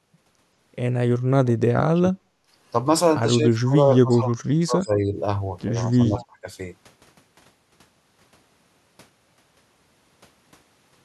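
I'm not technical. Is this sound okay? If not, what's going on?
No. There are two problems. The first is speech suppressed in double talk. The voice dips, gets duller or drops out in pieces from 1.43 to 2.32 s, 3.36 to 3.79 s, 4.01 to 5.09 s and 5.89 to 6.47 s. The first of these dips is the deepest, almost silent at its lowest. The likely cause is both people talking at once. The call's echo-removal got confused and turned the talker down.

The second is echo leak. Two brief scraps of echo come through, at 1.95 to 2.00 s and at 6.18 to 6.25 s. Each is a faint, delayed copy of the voice, arriving about 0.18 s late. This was likely a loudspeaker on the other end. Its echo-removal missed a little of the sound, and that bit was sent back.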